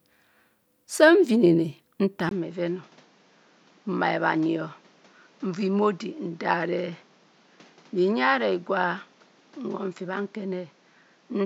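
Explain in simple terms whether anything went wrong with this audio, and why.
At 2.29 s, after a tiny gap, the speech turns duller, quieter and hissier to the end. That is likely an input switched to a poorer device.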